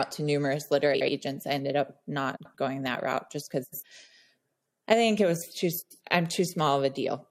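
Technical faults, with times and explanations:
0.94–1.08 s, 2.36–2.55 s, 3.63–3.83 s, 5.82–6.00 s: frames out of order. The four spots fall after "to numerous" and before "I ended", at 2.36 s, after "going that route just", and after "think it was too". At each, two adjacent blocks of about 70 ms (first) or 93 ms play swapped, which fits runs of three or four roughly 23 ms frames. The speech turns into a brief garbled flutter, but nothing is lost.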